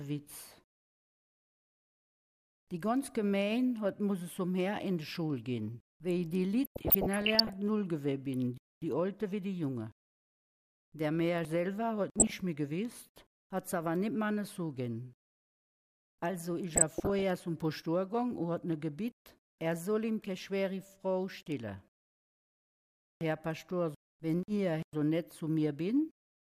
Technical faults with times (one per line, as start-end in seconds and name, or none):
6.64-7.54 DAB burbling
12.18-12.32 DAB burbling
16.73-17.22 DAB burbling